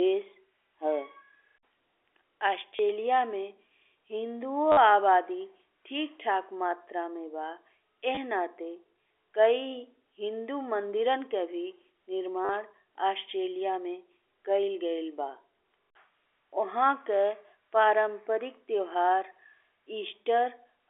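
Packet loss with last packet repeated hits at 2.76, 4.72, 8.15 and 12.45 s. Gaps of 20 to 50 ms are refilled by repeats. Each sounds like a robotic stutter.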